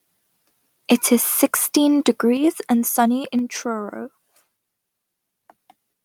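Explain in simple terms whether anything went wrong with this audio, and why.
Twice, at 2.37 s just before "and sunny" and again at 3.39 s right after it, the whole recording suddenly drops in level. This is a microphone volume stepped down event, likely the call software lowering the microphone's input setting because it judged the signal too loud.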